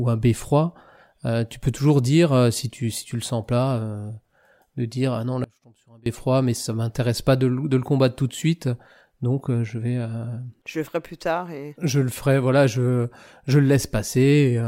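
At 5.44 s, an audio dropout to a faint residue, likely a signal loss, cuts the speech to a faint leak until 6.06 s, showing a sharp-edged, near-empty waveform gap.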